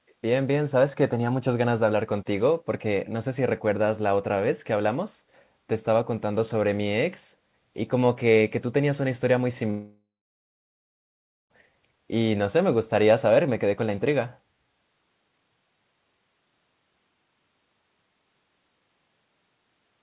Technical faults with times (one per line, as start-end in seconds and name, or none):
0.08-0.14 echo leak
9.70-11.52 long network dropout